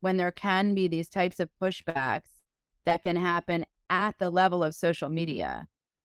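Lost or late packets between 1.81 and 4.36 s, after "be these types of", leave about seven scattered short gaps. Each is patched by extending the previous sound, causing brief ticks and smears.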